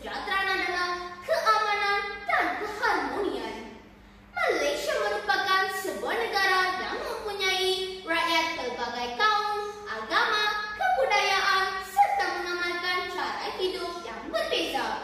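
No technical faults are audible anywhere in the sound.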